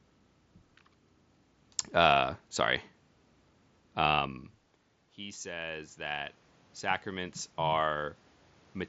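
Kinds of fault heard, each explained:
Automatic gain rising: from 5.16 s to 8.18 s the voice and the room noise behind it swell together, slowly, by about 9 dB. The input had dropped by about 18 dB, so the gain control judged it too quiet and raised its gain gradually.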